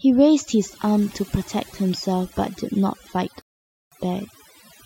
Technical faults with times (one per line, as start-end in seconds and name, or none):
0.00-4.86 overdone noise removal
3.42-3.92 rebuffering stall